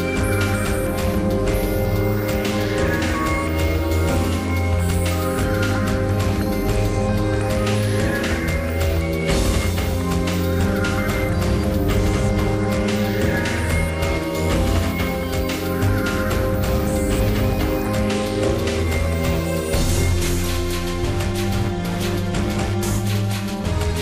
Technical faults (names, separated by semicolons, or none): none